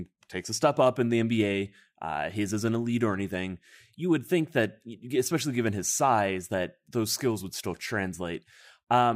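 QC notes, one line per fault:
The speech signal has no technical event that calls for a note.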